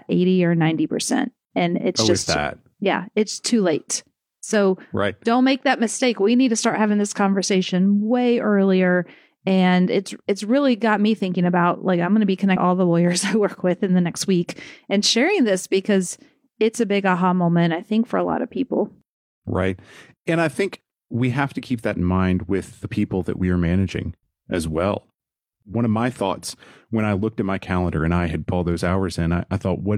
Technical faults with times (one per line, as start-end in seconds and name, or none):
12.52-12.57 damaged data in a compressed stream
28.48-28.53 damaged data in a compressed stream